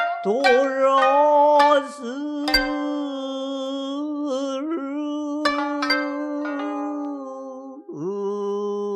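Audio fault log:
No faults can be heard anywhere in this audio.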